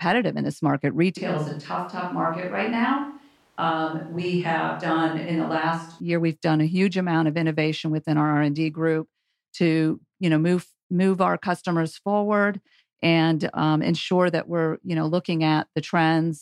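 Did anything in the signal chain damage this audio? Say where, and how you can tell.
Yes: a switch to a distant microphone from 1.17 to 6.00 s, after "in this market" and until "year we've done a". The speech turns abruptly roomy and thin, drops about 5 dB, and gains audible background noise. This is at the capture stage, likely a failed close mic with a far-off backup mic filling in.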